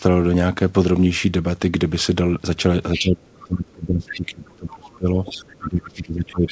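From 2.93 to 3.09 s, a scrappy second voice sits about 15 dB under the speech. It returns in brief fragments at 4.08 to 4.13 s, again near 15 dB down, and at 4.92 to 4.96 s, fainter at roughly 30 dB below. This is the other side's voice leaking through. The far end was likely playing on a loudspeaker and reaching the microphone, and the echo canceller left these remnants of it in the signal.

From 2.95 s to the end, the speech itself sags and breaks up. It loses level and high-end detail in patches, dipping by as much as around 25 dB at its lowest. This is speech suppressed in double talk. With both sides likely talking at once, the canceller could not tell the local talker from the loudspeaker echo and turned everything down together. The local voice thins out and cuts in and out while the leaked fragments come through over the same stretch.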